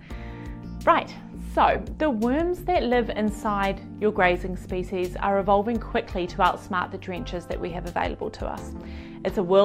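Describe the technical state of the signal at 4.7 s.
At 4.7 s the signal is intact, with no audible dropout, distortion or other fault at that point.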